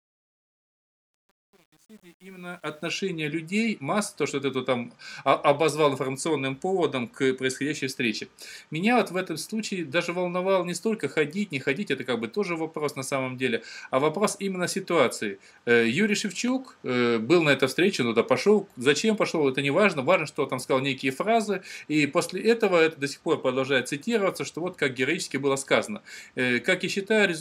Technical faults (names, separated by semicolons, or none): truncation distortion on a fade